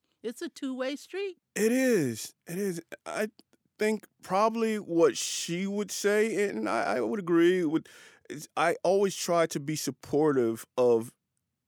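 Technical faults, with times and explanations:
Nothing technical jumps out here; the speech carries on from beginning to end without a single fault to point at.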